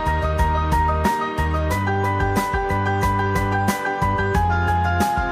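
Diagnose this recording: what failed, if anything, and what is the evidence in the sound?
Nothing failed at any stage of the chain: the signal holds continuity throughout, with no audible breaks, distortion, or other defects to diagnose.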